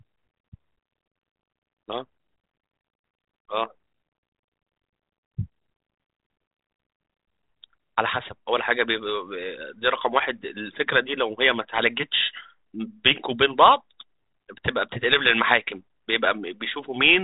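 Nothing stood out on listening to this speech clip, which comes through a G.726 telephone-band path at 32 kbit/s with no content above about 3.8 kHz.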